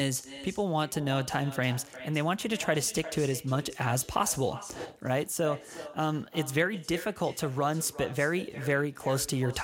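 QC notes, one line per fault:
Throughout: echo with no canceller. Each phrase of speech returns roughly 0.4 s later as a quieter, thinner copy, about 15 dB down. The far end's loudspeaker feeds its microphone, nothing removes it, and the network round trip sets the delay.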